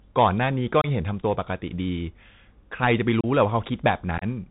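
Throughout, the speech passes through a Bluetooth CVSD headset codec, whose one-bit adaptive coding cuts everything above 4 kHz and leaves scratchy s sounds over a granular hiss. Unconcealed Bluetooth headset packet loss then drops stretches of about 26 ms at 0.81 s, 30 ms at 3.21 s, and about 34 ms at 4.18 s, spread as broken gaps over 38 ms. These are abrupt holes, each pointing to several lost packets.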